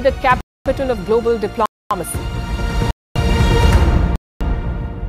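At 0.41 to 0.66 s, 1.66 to 1.91 s, 2.91 to 3.16 s and 4.16 to 4.41 s the sound drops out for 250 ms each time, a gap between chunks. The audio arrives in 1.0 s pieces with silence inserted at every join, so nothing is lost but the flow stops every 1.25 s. It is heard as regular, hard-edged holes. The waveform shows flat silent stretches with abrupt edges, and the spectrogram shows empty vertical bands spanning all frequencies.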